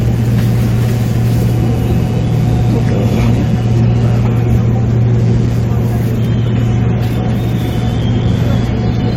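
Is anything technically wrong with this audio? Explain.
Yes, two faults are audible.

Computer activity noise runs through the whole clip: a buzzy pulsing at roughly 150 per second, about 30 dB below the sound. Processor or peripheral load shifts the shared ground of the audio circuit. On a spectrogram it shows as faint harmonic lines that track the computer's activity, not the sound.

Compressed frames skipped occur at 3.95 s, where roughly 150 ms of audio vanishes. That fits several whole 21.3 ms frames being dropped as missing or damaged.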